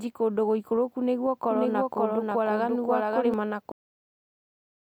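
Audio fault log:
1.50–3.34 s, doubled audio track: a second, equally loud copy of the speech runs about half a second behind the first, dry and without room colour, and it starts and stops abruptly. The likely cause is the audio being captured twice, once through a slower path, or an edit holding two misaligned copies.
3.72 s, cut-off end: the speech stops mid-sound and drops straight to digital silence, with no decay, for the rest of the clip. The final buffers were never written or played out, so the sound is simply truncated where the stream ended.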